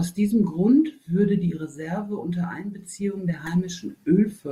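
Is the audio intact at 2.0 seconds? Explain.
Yes, the audio is intact at 2.0 seconds, without any audible fault.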